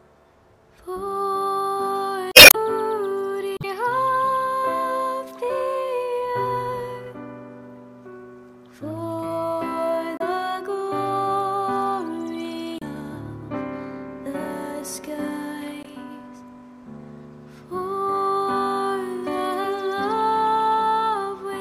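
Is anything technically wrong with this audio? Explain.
Yes. Damaged data in a compressed stream at 2.31–2.55 s, 3.56–3.65 s, 10.16–10.21 s, 12.78–12.83 s and 15.82–15.87 s. Corrupted bytes make the decoder misread frames and lose sync until it finds a valid header, producing short chirps or squawks, longest at 2.31 s.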